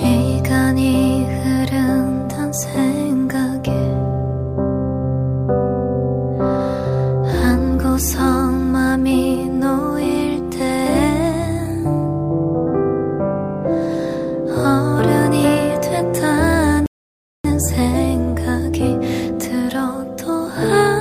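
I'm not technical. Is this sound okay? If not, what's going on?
No. At 16.86 s the sound suddenly goes silent, then picks up again at 17.44 s exactly where it left off. This is a rebuffering stall: the player ran out of downloaded audio and paused until more arrived, adding about 0.58 s without losing anything.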